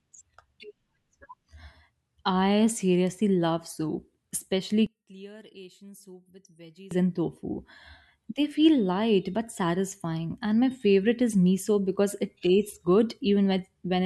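One channel inverted, from 4.87 to 6.91 s: the speech collapses to a faint residue, dropping by about 24 dB before recovering just ahead of "and tofu". The likely cause is one stereo channel with reversed polarity. When the two channels are summed to mono, everything they share cancels, so the centred voice and its low end nearly disappear. Only the slight difference between the channels survives, which is why the sound turns faint for those two seconds.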